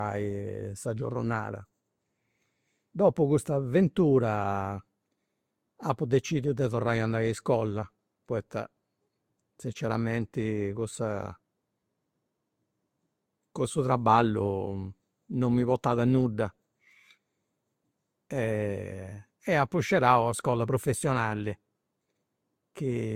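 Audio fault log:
Throughout: transcoding between lossy codecs. The speech carries layered artefacts that point to an Opus encode at around 48 kbit/s later re-encoded as Vorbis near 62 kbit/s, likely the cause. Nothing remains above 16.6 kHz, and the second encoder spends bits reproducing the first one's artefacts while adding its own.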